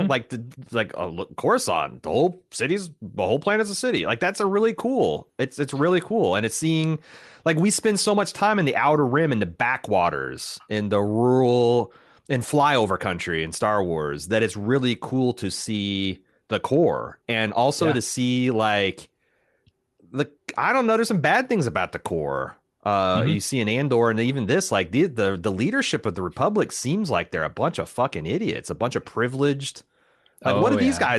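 No technical faults are audible.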